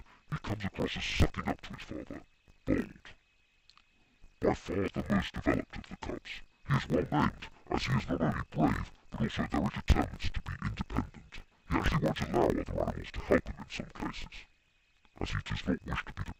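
From the very start and right through to the end, the audio has the interleaved-audio-read-as-planar fault. The stream carries left and right samples alternating, but each 20 ms block got split down the middle, first half treated as left and second half as right. Each half then plays stretched to twice its length, which drops everything an octave while keeping the overall pace. Because the blocks are so short, you also get a dull, robotic buzz at 50 Hz.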